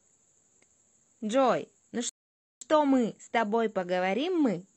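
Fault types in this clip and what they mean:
Rebuffering stall: The player used up its downloaded audio and had to wait for more data. The speech stops dead at 2.09 s. Silence follows until 2.61 s. Then the speech picks up at the exact point where it broke off. No part of the speech is skipped or repeated. The only cost is time. The gap adds about half a second, 521 ms, to the playback.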